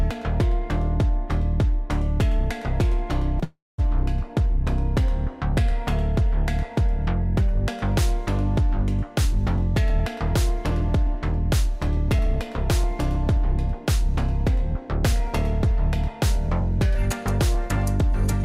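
At 3.39 s there's a short stall from a late packet, lasting until 3.44 s. A packet didn't show up on time, the jitter buffer ran dry, and the receiver stretched the last bit of sound by about 25 ms to cover the wait. Nothing was lost, since playback picked up from exactly where it left off. What you hear is that sound held a touch too long, with a bit of buzz or a dip in it.

Right after that, from 3.44 s to 3.80 s, comes a call audio freeze. The wait went on much longer this time, and the likely cause is packets held up in transit leaving the jitter buffer empty again. The receiver carries the last sound on as a buzz or hiss that fades, and about 190 ms of that stretch ends up as silence. Then the audio resumes from the same spot. Again nothing is missing, but about 343 ms of gap has been inserted, and everything after it is pushed that much later.

From 9.25 s to 15.94 s there's a jitter buffer speed-up. 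With more audio queued than it wants, the receiver trims out tiny pieces, a pitch period or a few at a time, over and over, to bring the delay back down. Altogether it removes about 150 ms. Playback runs at about 102% speed with the pitch unchanged. That's below the point where things start to sound obviously hurried, so it's a gentle push forward.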